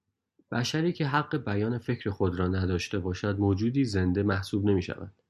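A short bit of recorded speech, and there's nothing technically wrong to point to anywhere in it.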